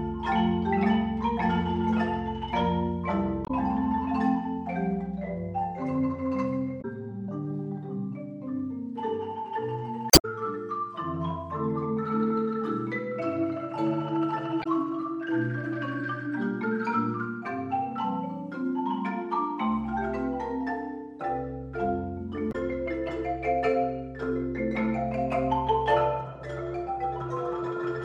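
The audio has damaged data in its compressed stream, heard five times: 3.44–3.50 s, 6.78–6.85 s, 10.10–10.25 s, 14.60–14.66 s and 22.49–22.56 s. Corrupted bytes make the decoder misread frames and lose sync. It then hunts for the next valid frame header.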